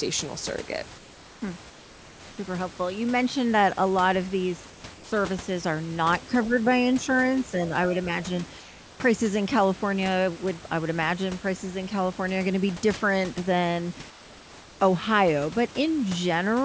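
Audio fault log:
0.98–1.42 s, 1.70–2.38 s, 4.70–4.84 s, 4.94–5.12 s, 8.60–9.00 s, 14.10–14.80 s: comfort noise in place of the background. The sending side likely stopped transmitting during speech pauses, and the receiver filled each gap with synthetic noise. The real room background becomes a flat, featureless hiss, about 2 to 4 dB quieter, for 140 to 700 ms at a time.
6.20–6.26 s: other side's voice leaking through. The echo canceller likely failed to remove all of the loudspeaker signal from the microphone. A brief 60 ms scrap of the far-end voice comes through very faintly, roughly 30 dB below the talker.
6.26–6.70 s, 6.95–6.99 s, 7.45–7.73 s: speech suppressed in double talk. With both sides talking at once, the echo canceller likely could not separate the talker from the echo and pulled its own talker down too. The voice dips in patches, by around 10 dB at the deepest in the first stretch and more lightly afterwards.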